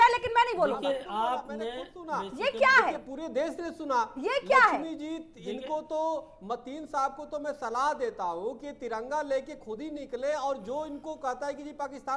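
Nothing stood out on listening to this clip.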